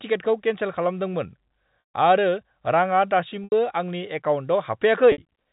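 At 1.80 to 1.94 s, 3.44 to 3.52 s and 5.12 to 5.18 s the speech hits packet loss with pitch repetition. Gaps of 140, 80 and 60 ms, consistent with 20 ms packets, are bridged by looping the last pitch period, so the shorter ones sound like a held, buzzy note. The 140 ms gap fades into silence before the speech cross-fades back. A plain dropout would cut straight to silence, and a codec glitch would not sustain the pitch. The narrow G.711 telephone band is audible throughout.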